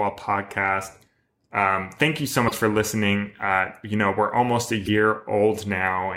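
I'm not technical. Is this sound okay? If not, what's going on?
No. There are two short glitches in this speech, at about 2.44 to 2.51 seconds and 4.82 to 4.89 seconds, each lasting about 70 milliseconds. Both are damaged data in a compressed stream: a small piece of the stored file was corrupted, so the player could not decode that stretch properly and had to find its place again. Each one comes out as a brief chirp or blip.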